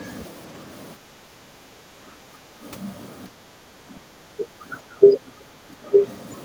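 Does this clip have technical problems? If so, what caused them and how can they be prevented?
Yes. Background gated by the echo canceller: at 0.98 to 2.62 s, 3.3 to 3.84 s and 5.73 to 5.83 s the canceller pulled the microphone down by about 8, 11 and 9 dB while the loudspeaker played. The room tone sinks, showing as flattened noise-floor troughs in the waveform and faded bands on a spectrogram. Prevention: use a gentler suppressor setting so background noise is attenuated less during far-end playback.

Speech suppressed in double talk: at 4.12 to 4.17 s, 4.36 to 4.64 s, 4.82 to 5.18 s and 5.36 to 5.45 s the speech dips sharply in brief pieces. This is likely because the canceller could not separate the talker from the echo, so it attenuated both. These drops appear as chopped notches in the envelope. Prevention: use an echo canceller with robust double-talk detection that keeps near-end speech open while the far end is active.

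Other side's voice leaking through: at 5.05 to 5.1 s a faint scrap of a second voice slips in, well below the main speech. It is likely residual loudspeaker echo the canceller failed to remove, and it shows as a weak, smeared harmonic trace overlapping the talker's. Prevention: lower the loudspeaker volume or use a headset, and let the canceller fully converge before conversation starts.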